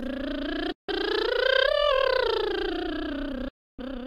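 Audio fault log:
0.72–0.90 s and 3.48–3.80 s, Bluetooth dropout: the music goes silent for about 0.16 s, then for about 0.30 s, and resumes further along as though it had played on underneath, likely because audio packets reached the headphones too late and were discarded.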